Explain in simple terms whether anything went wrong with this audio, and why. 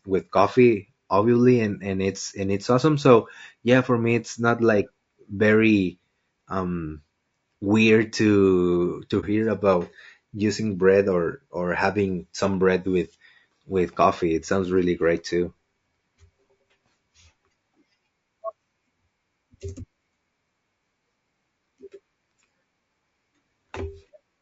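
Two things went wrong with this speech recording.

Throughout the clip the voice sounds rough and grainy, with a hiss in the gaps between its tones and a thin, artificial top end. This is low-delay AAC compression, likely from AAC-ELD, the format used for video calls. To keep delay short it cuts sound into very small slices, which capture a voice's pitch poorly when data is tight. Unlike background noise, this graininess is woven into the voice itself.

At about 9.20 s, right after "um weird to to" and just before "hear about using bread", the sound briefly drops out for about 30 ms. This is AAC frame loss with muting. One chunk of data went missing, and the player filled it with silence, fading out and back in rather than cutting abruptly. That is why it sounds like a brief dip.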